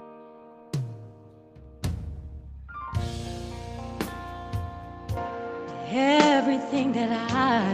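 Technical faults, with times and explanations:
5.17 s to end, likely an input switched to a poorer device: without a gap, sound turns dull, nothing above 7.6 kHz, with a level shift of about 5 dB and faint new background noise.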